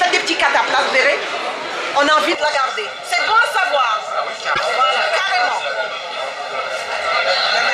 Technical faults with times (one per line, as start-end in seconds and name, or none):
2.35-7.73 channel delay (comb filtering)
4.51-4.60 damaged data in a compressed stream